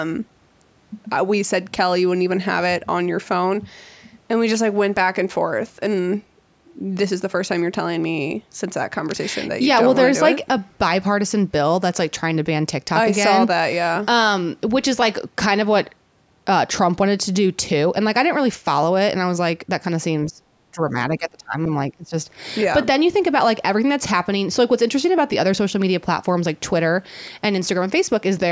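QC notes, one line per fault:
20.28–22.14 s, speech suppressed in double talk: the speech ducks in four bursts, at 20.28–20.53, 20.72–20.95, 21.18–21.69 and 21.91–22.14 s, sinking by roughly 15 to 25 dB. Likely the echo canceller couldn't separate this talker from incoming echo and turned both down.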